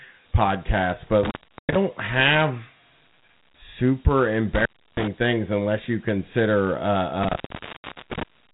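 From start to finish the speech carries Dialogic VOX ADPCM damage. Nothing sounds above about 3.9 kHz. That edge fits an 8 kHz sample rate. Each sample is coded as a small 4-bit step from a running prediction, which fits a 32 kbps stream. The steps are coarse and the predictor lags. A gritty hiss rides on the speech and rises and falls with it. The damage is plainly audible.

At 1.24 s, just after "podcasts but", an intermittent contact breaks the signal. A loose connection opens, and the speech drops out for about 0.39 s. Crackle marks the break and the return. Faint hiss fills the gap. The fault ends at 1.76 s.

The same fault returns at 4.55 s and lasts to 5.08 s, with the line open for about 0.32 s. The speech resumes with "things unless you consider".

The longest dropout runs from 7.23 s to 8.23 s. The line stays open for about 0.73 s. Crackle marks both edges again.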